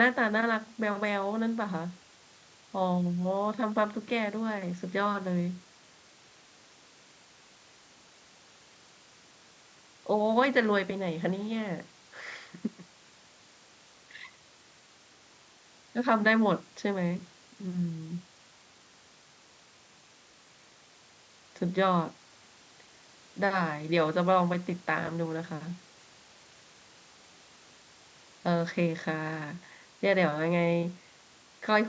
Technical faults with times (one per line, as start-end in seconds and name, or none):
none